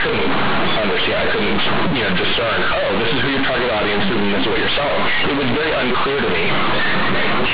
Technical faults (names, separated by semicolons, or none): companded audio read as linear